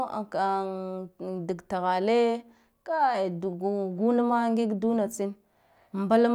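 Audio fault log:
No technical faults can be heard anywhere in the speech signal.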